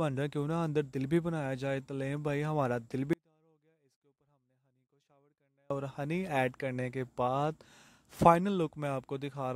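The audio suffers an audio dropout to a faint residue from 3.13 s to 5.71 s, losing about 2.57 s of signal. The level falls away abruptly rather than fading, and through the gap only a faint trace of the sound remains, roughly 40 dB below its normal level, before it returns just as suddenly. The likely cause is a break in the wanted signal upstream while the path after the break stayed live, passing only this low-level leak.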